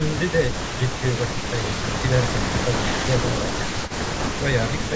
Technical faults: speech suppressed in double talk; echo leak

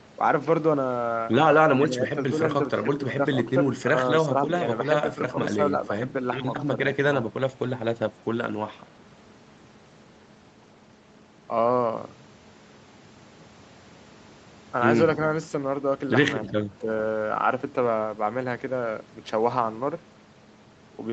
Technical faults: speech suppressed in double talk

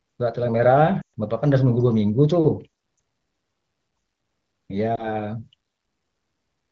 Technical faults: lost AMR speech frames

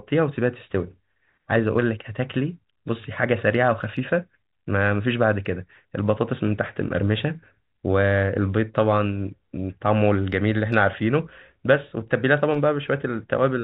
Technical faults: none

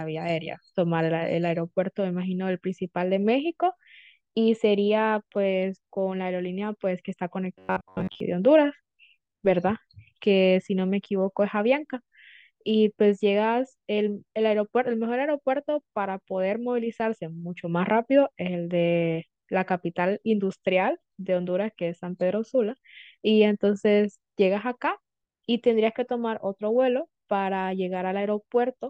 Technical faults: robotic sound from repeated short buffers

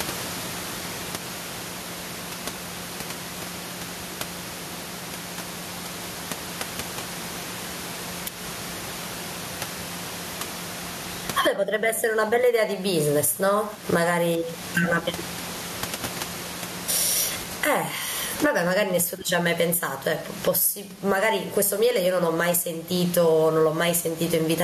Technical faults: gain pumping

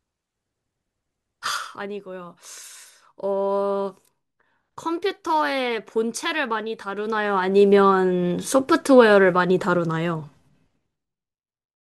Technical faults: zipper noise

